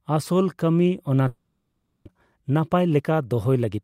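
From 1.27 to 2.11 s the speech gives way to a fading buzz; about 620 ms never returns, likely a long network dropout rather than a brief packet gap. From 2.19 to 3.79 s a jitter buffer speed-up plays speech about 10% faster at unchanged pitch, trimming roughly 150 ms, unlike resampling, which would raise pitch.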